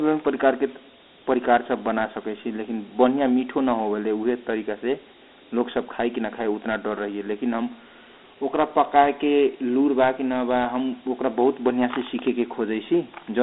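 From start to finish the speech carries Dialogic VOX ADPCM coding, the 4-bit adaptive scheme used for phone menus and voicemail. The sound is confined to a telephone band of roughly 300 Hz to 3.6 kHz, with nothing above 3.8 kHz, which fits an 8,000-sample-per-second rate and a 32 kbps stream. Because each step is coded as a coarse 4-bit difference, quantisation error rides on the speech as a plainly audible gritty hiss that tracks its level.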